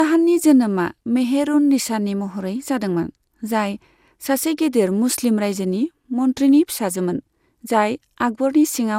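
Throughout the speech the sound is swirly and hollow, with smeared consonant attacks and a watery, shifting noise floor, and nothing reaches above 17.2 kHz. This is generation loss, likely from repeated decoding and re-encoding, perhaps around fifteen passes, through a codec that sounds like MP2 at about 128 kbit/s. Each pass requantises on a shifted frame grid, so the errors pile up far beyond what that bitrate alone produces.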